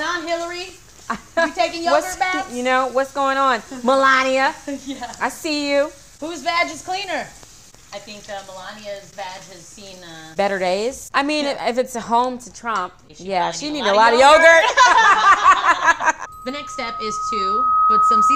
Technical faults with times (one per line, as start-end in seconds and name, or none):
16.26-18.35 loudspeaker feedback squeal